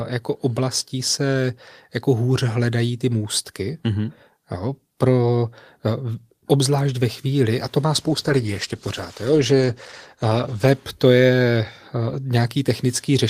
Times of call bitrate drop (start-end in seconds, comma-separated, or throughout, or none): 7.96-10.75